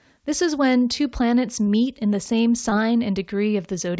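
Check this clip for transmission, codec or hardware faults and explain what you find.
One transmission fault is audible, a short concealed packet loss, heard through a call path whose audio stops at 8 kHz, which fits a wideband call codec such as G.722.

Between 2.70 and 2.73 s the speech briefly smears, with a momentary wobble where the sound seems to stretch and then blend back. This is short concealed packet loss: about 20 ms of audio never arrived in time. The receiver synthesised roughly 14 ms by extending the preceding sound, then crossfaded back into the real signal.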